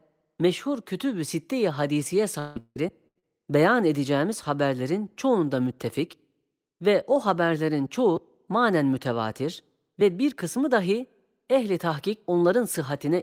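Repeated packet loss (robotic sound) runs from 2.39 to 3.25 s, just before "beyan edeceğimiz haberlerin çoğunda". Four gaps, the longest 162 ms, are each patched by stretching the preceding sound, so about half the stretch is concealed filler, giving choppy speech with pieces missing.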